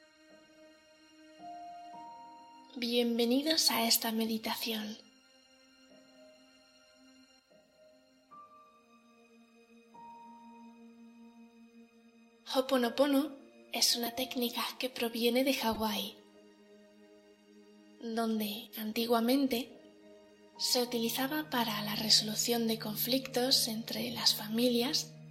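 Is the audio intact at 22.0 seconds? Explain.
Yes, at 22.0 seconds the audio plays through intact, with no dropout, click, distortion or other break.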